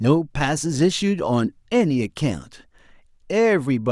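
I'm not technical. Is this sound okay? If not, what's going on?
Yes, this speech recording is fine. Nothing in it points to a technical problem that needs explaining.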